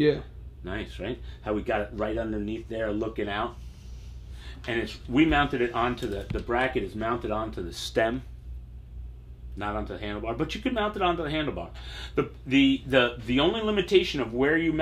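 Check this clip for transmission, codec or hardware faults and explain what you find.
There's one fault, a single click at 12.07 s, and it's most likely dropped samples. A couple of samples seem to go missing, so the waveform jumps straight to a later value. That step is a tiny fraction of a millisecond, too short to cut any sound, and comes through as one sharp tick.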